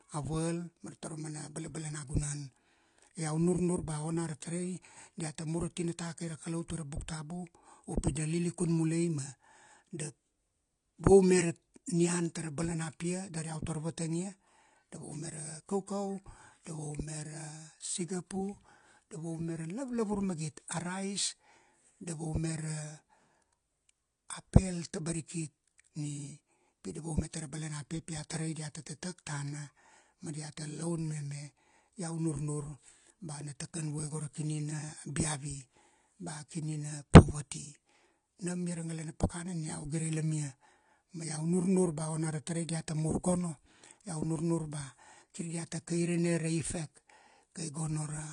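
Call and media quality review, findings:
AAC compression, whole clip (0 to 48 s): speech dull and smeared, warbling on sustained sounds, fizzy sibilants. Nothing above 10.1 kHz. Spectrogram shows a hard, flat ceiling at 10.1 kHz across the full length rather than a natural roll-off. Waveform gives no clue. Likely an AAC-LC encode at a low rate, consistent with about 32 kbps: the encoder drops the top band and quantises the remaining frequency lines coarsely, so damage is plainly audible.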